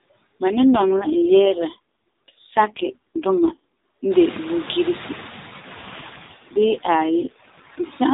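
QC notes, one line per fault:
throughout: noise suppressor artifacts. The suppressor pulls down every band it judges to be steady noise, by about 12 dB, frame by frame, so the room noise dips between phrases and swells under them. That noise rises by about 20 dB around 4 s.
0.44–3.65 s and 5.60–7.86 s: AMR rate drop. The link forces the mobile codec down to a leaner mode, which fits a fall from 12.2 kbps to 4.75 kbps, and fewer bits describe each frame. The band and continuity stay intact, but the speech turns buzzy and synthetic until the rate recovers.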